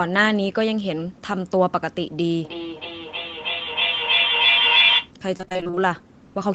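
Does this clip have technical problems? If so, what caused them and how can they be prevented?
Yes. Feedback echo between two devices runs from 2.44 to 5.14 s. A second device in the room plays the call back into the first microphone, whose echo canceller cannot remove it. Each phrase returns roughly every 300 ms and builds up, peaking about 4 dB above the speech instead of fading. Prevent it by joining the call from only one device per room, or by muting the extra device's speaker and microphone.

Repeated packet loss, heard as robotic sound, follows from 5.37 to 5.79 s. Many short dropouts, the longest about 23 ms, were patched by stretching the preceding sound, so nearly half of that stretch is filler. This makes it choppy, with pieces missing. Prevent it with a steadier connection, such as wired rather than congested Wi-Fi, or with stronger loss protection in the call settings.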